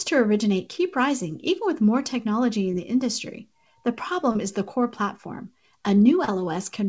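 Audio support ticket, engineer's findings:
Short concealed packet loss, 2.72–2.74, 4.32–4.36, 6.25–6.29 s: brief smears where about 10, 30, 30 ms of speech was missing and resynthesised by jitter-buffer concealment. Spectrogram: smeared, repeated harmonics; waveform: copied periods, then crossfade.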